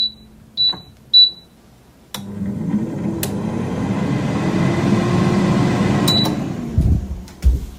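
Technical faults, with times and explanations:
No technical faults can be heard in this audio.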